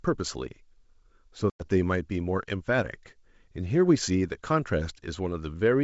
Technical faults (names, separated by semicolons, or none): packet loss on an ADPCM call